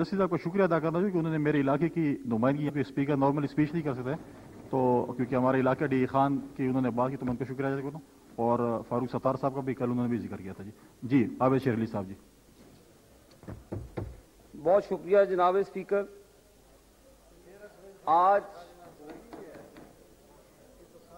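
Damaged data in a compressed stream occurs twice. From 2.65 to 2.70 s, corrupted bytes leave the decoder unable to parse the frames it is reading, so it loses sync and searches for the next valid frame header. The sound breaks up briefly, lasting about 40 ms. At 11.63 s the same fault recurs more briefly, and the stream recovers almost immediately, leaving a quick blip.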